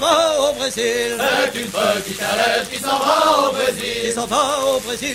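Overlap-add ripple runs throughout the clip. The audio was split into windowed frames and rejoined with an overlap whose gains do not sum evenly, so the level dips and swells by about 6 dB at around 100 Hz, heard as a metallic buzz with extra tones around each note.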